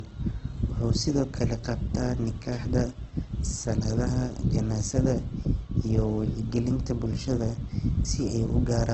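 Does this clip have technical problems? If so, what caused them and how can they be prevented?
Yes. Throughout the clip the speech sounds dull, with nothing above 8.5 kHz and the artefacts of the first encoding still present. This is likely low-bitrate audio saved at a high bitrate. The recording was first squeezed through a very low-rate speech codec, consistent with Opus at around 12 kbit/s, then re-encoded as a roomy MP3. The larger MP3 cannot restore the discarded treble and detail, so the first codec's damage remains. To prevent this, encode once from the original source and never upscale an already compressed file.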